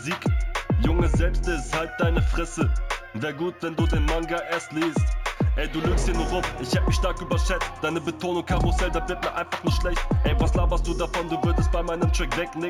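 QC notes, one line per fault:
Throughout, imaging from linear upsampling: straight-line interpolation, consistent with a 16 kHz source, dulls the top band and leaves faint mirror images between 8 and 16 kHz, roughly 30 dB down, giving a metallic shimmer.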